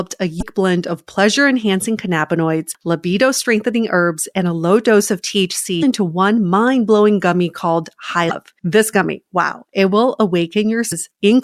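Brief glitches break the speech at 0.38–0.43, 5.79–5.83, 8.27–8.31 and 10.88–10.93 s. These are damaged data in a compressed stream: corrupted frames are misdecoded while the decoder resynchronises.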